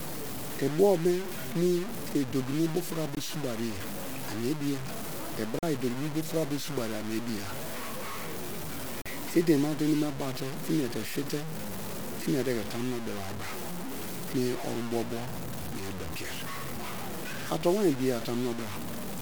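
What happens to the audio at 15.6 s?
At 15.6 s the speech carries the same grainy, gritty distortion present across the whole clip, the signature of low bit depth without dither. The likely cause is truncation to about 5 bits with no dither applied, so the rounding error tracks the waveform instead of forming a steady hiss. The resulting error sits only around 10 dB below the signal, making quiet passages coarse and causing the softest parts to sputter between steps or drop out.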